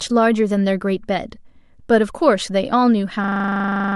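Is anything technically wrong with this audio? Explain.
Yes. From 3.24 s to the end, a system hang loop repeats one 40 ms buffer nineteen times, a 25 Hz buzz replacing roughly 0.7 s of speech.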